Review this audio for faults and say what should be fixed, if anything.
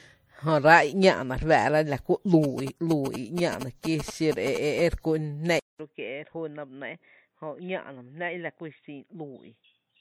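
Generation loss runs through the whole recording. The speech sounds swirly, smeared and hollow, and consonant attacks are blurred, more than a single lossy encode would explain. The likely cause is repeated MP3 encoding at around 64 kbit/s, perhaps three passes. Each decode and re-encode quantises the audio again on a shifted frame grid, so noise and spectral holes build up. To prevent it, keep the working copy in a lossless format and encode to MP3 only once, at the final export.

GSM signalling bursts run from 2.44 s to 4.80 s, starting just after "re fáá’ra la kú". A galloping dit-dit-dit of short buzzes at about 217 Hz sits roughly 10 dB below the speech. A nearby 2G phone was sending short groups of radio bursts while signalling, and the audio circuitry rectified them into audible pulses. To prevent it, keep mobile phones away from the microphone, cables and interface, or switch them to flight mode.

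An input switched to a poorer device is heard from 5.59 s to the end. There is about 200 ms of silence, then the sound turns dull and boxy, with nothing above 3.8 kHz. The level drops by about 10 dB, and a new noise floor appears roughly 55 dB below the speech. This likely comes from the system moving to another microphone or to a headset's narrowband call profile partway through. To prevent it, lock the recording input to one device and disable automatic device switching before recording.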